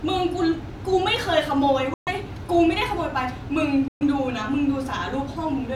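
Bluetooth dropouts cut this speech clip twice, from 1.94 to 2.09 s and from 3.88 to 4.03 s. Each is a hole of about 0.15 s where the output falls silent, then resumes as if the speech had kept running underneath. The likely cause is audio packets failing to reach the headphones in time and being discarded, roughly 128 ms of sound per gap, which fits about six lost packets each time.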